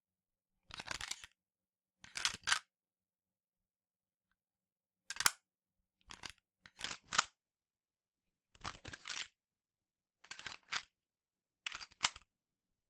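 From 6.85 s to the end, an adaptive stream at a lower bitrate takes over without a gap. Codec artefacts rise, and on a spectrogram everything above 8.8 kHz abruptly vanishes.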